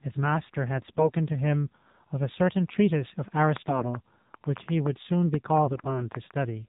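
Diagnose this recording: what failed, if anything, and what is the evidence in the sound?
The whole clip runs through an AMR narrowband mobile codec at the codec stage. Nothing above 4 kHz survives, so the speech is thin and phone-like. The voice has a buzzy, synthetic edge. At this bitrate, 7.4 kbps, the encoder has few bits for the pulses that drive its vocal-tract model. The damage is plainly audible in every phrase.

AMR bit errors, a network fault, hit three stretches: 0.78 to 1.11 s, 3.58 to 3.99 s, and 5.66 to 6.09 s. In each, the speech keeps its rough pitch and loudness but turns hoarse, scratchy and gargly. A weak radio link flipped a few percent of the less protected bits. The checks on the key bits still passed, so the decoder used bad pulse, gain and spectral values.

A train of clicks runs from 3.37 to 6.32 s. There are about fifteen similar pops at roughly four per second, irregularly spaced. 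They tick through the speech and the gaps alike. The loudest stand around 10 dB above the signal. The likely cause is interference or a struggling interface injecting pulses in the analogue wiring or converter stage. The clicks overlap the last two bit-error stretches.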